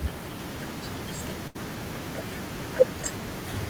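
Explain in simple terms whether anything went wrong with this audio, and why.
Something did go wrong: a burst of packet loss hits the speech between about 1.47 and 1.57 s. Several consecutive chunks of audio never arrived in time, so the receiver filled the hole by stretching the last sound it had and letting it fade, roughly 73 ms of patched-in sound. When the audio picks up again, about 80 ms of the original speech has simply been skipped, causing a brief smeared or buzzy blip and a small jump forward.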